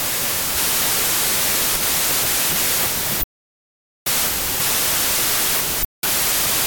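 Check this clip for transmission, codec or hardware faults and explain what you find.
There's one fault, and it runs through the whole clip: a wrong sample width. Packed 24-bit samples are being read as 32-bit ones, so each value is built from bytes belonging to neighbouring samples. The speech sits underneath a wall of loud, harsh noise. It plays about 1.33 times too fast, so the pitch is raised by the same ratio, because four bytes are consumed per sample instead of three.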